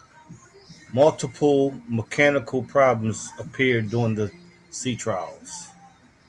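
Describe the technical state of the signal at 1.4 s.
At 1.4 s the speech signal is intact, with no dropout, clipping, distortion or other technical fault to be heard.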